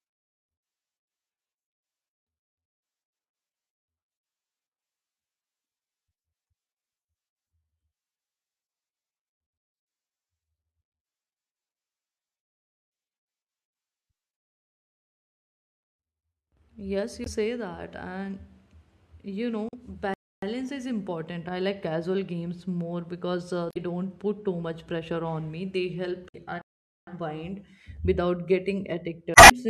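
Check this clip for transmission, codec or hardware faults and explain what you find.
Two kinds of fault turn up in the second half of the speech: repeated bursts of damaged compressed data and two playback stalls.

Damaged data in a compressed stream occurs at 17.23, 19.69, 23.69, 26.29 and 29.33 s. Each lasts between about 40 and 190 ms, with the longest near the end. At those points the decoder hits corrupted frames, loses sync and has to hunt for the next valid frame header. Each event is heard as a brief chirp, squawk, click or short hole in the speech.

Playback stalls occur at 20.14 s, lasting 285 ms, and at 26.62 s, lasting about 457 ms. In both, the speech cuts to silence in mid-flow and then resumes. The likely cause is the player running out of buffered data or its output thread being blocked until it recovered. The second stall follows the 26.29 s damaged-data burst closely, so the two faults are heard almost back to back there.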